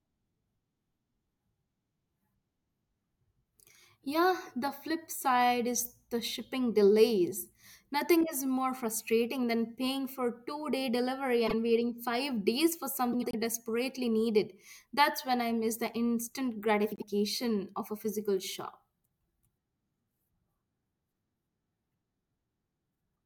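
Short garbled flutters, at 11.47 to 11.54 s, 13.12 to 13.35 s and 16.91 to 17.04 s, are frames out of order: neighbouring blocks of about 24, 96 and 48 ms play swapped, with no time lost.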